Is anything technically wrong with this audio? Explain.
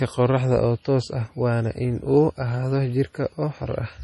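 Yes. Throughout the speech there is a hard treble ceiling at 11.4 kHz with watery, swirling artefacts, likely heavy MP3 compression at a rate that fits about 32 kbps. Short of bits, the encoder drops weak frequency lines frame by frame, so the spectrogram shows a flat cutoff and flickering holes.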